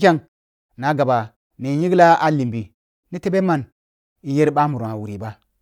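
No technical faults are audible.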